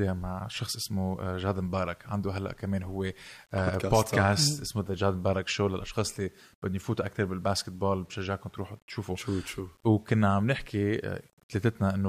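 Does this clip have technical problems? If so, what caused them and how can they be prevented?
Yes. The likely cause is undithered rounding to a very coarse resolution, consistent with about 9 bits, so gritty distortion follows the speech throughout, roughly 35 dB below it. To prevent it, keep 16 bits or more and add dither before any reduction in bit depth.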